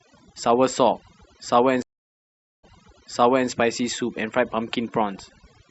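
Overdone noise removal runs through the whole speech clip. The suppressor pulls individual frequency bands down whenever they sit close to its noise estimate, so the background collapses into near silence flecked with twinkling artefacts, and softer parts of the voice vanish.

A stream reconnect spans 1.82 to 3.49 s. The connection dropped and the player fell silent for 0.81 s, then restarted decoding with a fresh decoder. Playback resumes 0.86 s earlier than where it cut off, so a short stretch of speech is heard twice.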